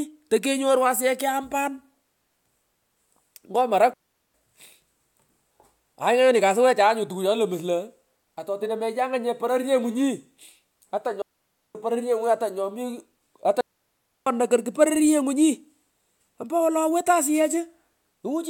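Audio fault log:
3.93–14.27 s, digital wireless dropout: clean, noise-free near-silent gaps at 3.93–4.34, 11.22–11.75 and 13.61–14.27 s, as the receiver mutes after losing too much radio data.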